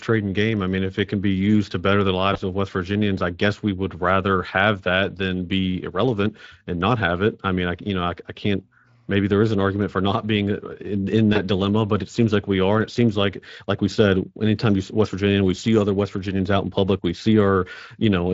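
VoIP packet loss concealed by the speech codec occurs at 2.33–2.38 s, after "used to better the", and at 11.33–11.41 s, between "being uh in in" and "dilemma but it seems". Each gap fits one lost 20 ms frame. The decoder extends the preceding sound into a brief fading buzzy tone or coloured noise, and the damage lingers for a short time afterwards.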